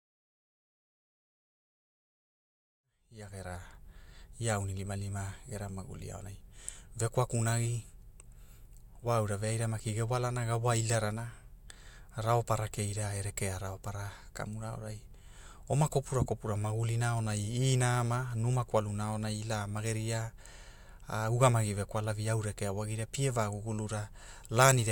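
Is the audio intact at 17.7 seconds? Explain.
Yes, the audio is intact at 17.7 seconds, with no fault at that moment.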